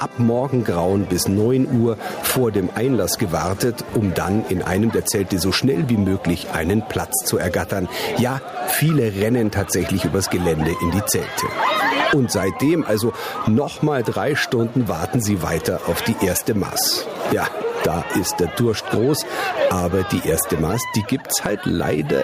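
The audio shows gain pumping from start to finish. The gain swings by about 15 dB, so loud and soft passages sit squashed close together in level. On a waveform the peaks look flattened to a near-constant height. The likely cause is an input gain set far too high, with a fast limiter or compressor clamping it down on every loud sound.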